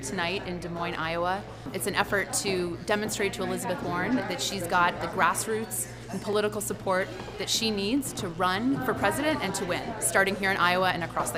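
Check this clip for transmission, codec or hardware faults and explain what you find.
One fault is audible: a single dropout near the middle of the clip.

Block of digital silence at 6.33 s: for about 0.67 ms the signal drops out and then returns, which fits a 32-sample block left unfilled when the output buffer wasn't written in time or was zeroed after an invalid calculation. There is no fade at either edge, so both abrupt transitions merge into one sharp tick. The gap is too brief to be heard as a hole.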